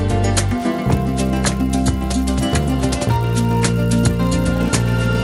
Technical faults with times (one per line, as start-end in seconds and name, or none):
0.48-5.24 resampler restarted on every block